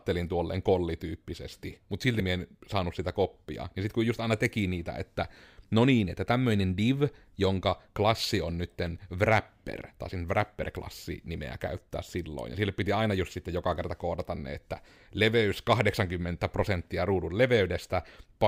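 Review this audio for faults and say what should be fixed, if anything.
Nothing stood out on listening to this speech recording, so there is nothing here that needs fixing.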